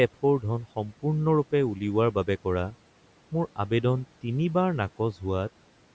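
Between 0.62 and 1.04 s the noise suppressor cuts into the speech, mistaking parts of it for room noise and pulling them down by up to about 11 dB. Around a tenth of a second in total sounds swallowed and faint, sinking toward that background noise.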